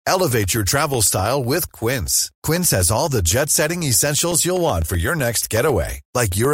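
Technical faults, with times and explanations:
0.07–6.45 s: periodic USB or driver dropouts, about 1 ms replaced by silence every 0.125 s, so speech ticks steadily; waveform shows evenly spaced gaps, spectrogram thin broadband vertical lines.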